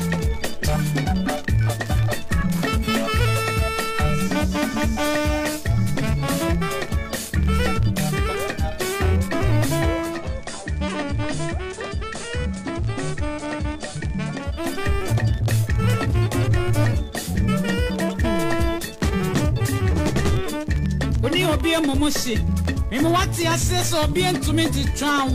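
At 9.91 s the receiver lost its digital signal and went through digital radio blending to analogue, cross-fading over about 0.42 s to the station's FM broadcast until 14.78 s, when it blended back. Across that stretch the level drops by about 5 dB, and a steady FM hiss rises, sitting roughly 35 dB below the programme.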